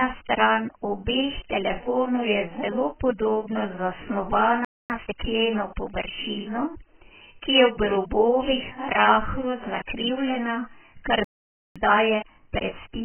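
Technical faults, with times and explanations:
Throughout, AAC compression: The encoder likely had a very small bit budget, which fits AAC-LC at around 9 kbps. It spends its few bits on the strongest parts of the spectrum and gives up the higher frequencies. The speech sounds heavily dulled and muffled. Fricatives and sibilants are smeared and fizzy, and sustained vowels warble where the quantiser leaves holes between frequency bands.
4.65–4.90 s and 11.24–11.76 s, playback stall: The player likely ran dry of buffered data, or its output thread was held up, so nothing reached the output until it recovered. The speech cuts off abruptly mid-flow into silence, for about 0.25 s the first time and about 0.51 s the second. It then resumes from where it stopped.
4.90–5.14 s and 11.76 s to the end, time-compressed catch-up: After each stall the player works off its backlog by removing small slices and cross-fading the joins, keeping the pitch unchanged. 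After the first stall it runs at 2.0 times normal speed, which sounds clearly rushed but for only a quarter second. After the second it runs at 1.15 times speed until the clip ends, which is a milder but longer hurry.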